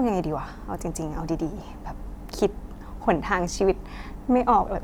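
No technical faults are audible.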